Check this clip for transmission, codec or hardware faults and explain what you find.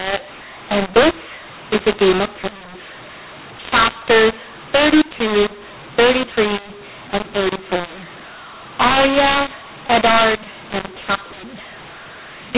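One fault runs through the entire clip: mu-law and A-law mixed up. The speech was coded with mu-law G.711 and then decoded as though it were A-law, so each 8-bit code is expanded along the wrong logarithmic curve. Some levels come out too loud, others too soft, and the quietest samples jump well above silence. The speech sounds harsh and gritty, and noise fills every pause. On a waveform, pauses never settle to the centre line and peaks look jagged. A spectrogram shows broadband noise smeared through the silent gaps. The telephone band still stops at 4 kHz, which fits 8 kHz sampling.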